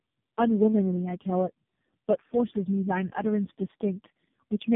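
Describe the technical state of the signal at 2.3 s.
At 2.3 s the speech is still carrying tandem speech coding, which runs through the whole clip: it has passed through three low-rate speech coders in a row, decoded and re-encoded at each link, with the last stage sounding most like AMR-NB at a low rate. Each coder re-models what the previous one had already damaged, so the voice comes out rough, muffled and warbly, with nothing above 3.7 kHz.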